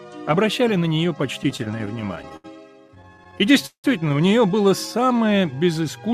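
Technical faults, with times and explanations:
1.43–2.46 s, repeated stalls (stutter): fourteen short gaps, longest 76 ms, were bridged by continuing the last sound, so the audio drags and stutters without losing anything.
2.88–3.86 s, repeated stalls (stutter): eleven gaps, one lasting 176 ms, were filled by extending and fading the preceding sound while late packets arrived, leaving a halting drag.
4.68–5.19 s, jitter buffer slow-down: the receiver repeated single pitch periods to rebuild its reserve, adding 70 ms and playing at 88% speed at unchanged pitch.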